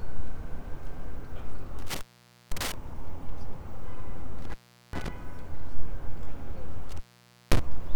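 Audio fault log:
1.79–2.74 s, 4.39–5.08 s and 6.89–7.59 s, intermittent contact: the sound drops out three times, for about 0.50 s, 0.39 s and 0.52 s. Each dropout starts and ends with a crackle, and faint hiss remains during the gaps. A loose plug or cable connection is briefly breaking and remaking the signal path. The scraping contact makes the edge noise, and with the signal line open only the downstream noise floor gets through.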